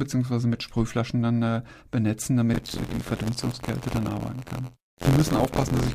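Buffer tearing from 2.53 s to the end: writer and reader slipped, so each period replays audio about 50 ms old, giving an 86.1 Hz buzz that fits a 512-sample buffer.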